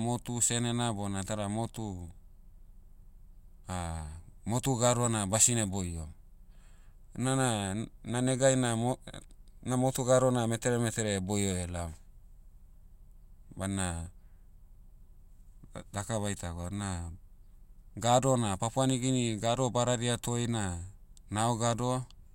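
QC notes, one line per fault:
Nothing stood out on listening to this recording.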